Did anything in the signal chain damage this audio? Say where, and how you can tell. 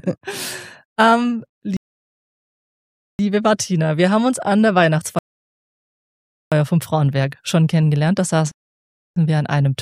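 Yes: playback rebuffering stalls at 1.77–3.19, 5.19–6.52 and 8.51–9.16 s. The starved player falls silent, a flat waveform gap, then resumes exactly where it stopped.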